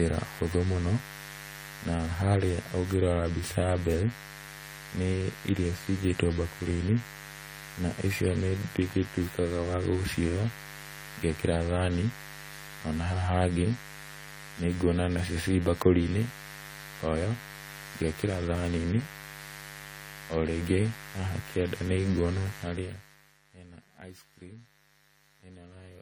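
From the start, a steady, raspy mains buzz sits about 15 dB below the speech. Sharp switching spikes from a dimmer, rectifier or unshielded path enter twice per 50 Hz cycle, so the 50 Hz harmonics stack up into the kilohertz range and give the buzz its edge.

Also throughout, the speech sounds swirly, smeared and hollow, with blurred consonant attacks and nothing above 19.9 kHz. This is generation loss, likely from around seven successive AAC-LC encodes at 64 kbit/s. Each pass re-quantised on a shifted frame grid, so the noise accumulated.

From 22.59 to 23.39 s, zipper noise rides on a level drop of roughly 20 dB. The gain moves in 1 dB steps at about 30 per second with no smoothing, so each step leaves a small click and together they form a rapid ticking during the fade.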